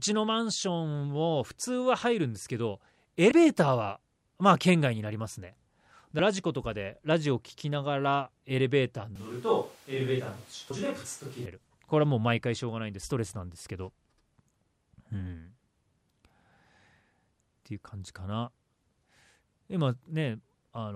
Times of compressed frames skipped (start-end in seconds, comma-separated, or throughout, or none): 3.31, 6.19, 10.70